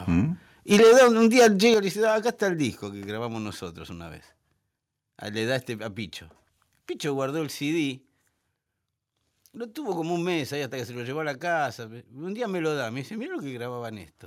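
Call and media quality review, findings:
Microphone overload, 0.71–1.74 s: harsh crackle on loud speech peaks, likely input gain about 10 dB too hot; waveform shows flat-topped peaks on a sizeable share of samples, with spectrogram smearing upward.

Microphone volume stepped down at 0.74 s (about 2 dB) and 1.74 s (about 7 dB): likely automatic input-gain reduction reacting to clipping; waveform envelope drops abruptly, with speech and background falling together.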